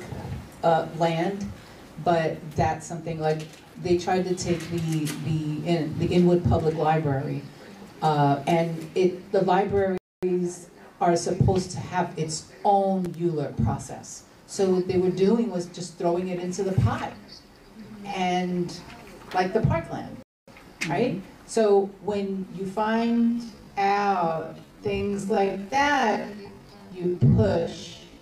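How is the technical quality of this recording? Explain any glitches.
The technical quality is compromised by three kinds of fault: two dropouts, a short crackle, and a slowed final stretch.

Gap between chunks, at 9.98 to 10.23 s and again at 20.23 to 20.48 s: each is a 250 ms hole of silence, and they fall on a regular rhythm that fits the audio being handled in 10-second chunks with dead time inserted at each join. Nothing is lost from the material itself, but the flow stops abruptly. On a waveform each appears as a flat, empty band with sharp vertical edges; a spectrogram shows a clean blank column across all frequencies.

Loose connector crackle, at 13.04 to 13.15 s: a burst of about a tenth of a second of irregular scratching, the sound of a worn or dirty contact briefly making and breaking the signal path, with any DC on the line turning each break into a pop. The waveform shows jagged, spiky transients and chopped segments; on a spectrogram it appears as scattered broadband vertical streaks reaching into the high kHz range.

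Time-stretched section, from 22.80 s to the end: the pace abruptly drops to roughly 0.54 times normal speed while pitch stays unchanged, so the audio drags. This is likely pitch-preserving stretching software that repeats short fragments to lengthen the passage. A spectrogram shows harmonics at the same heights but drawn out and blurred horizontally, and the waveform reveals repeated, similar-looking cycles.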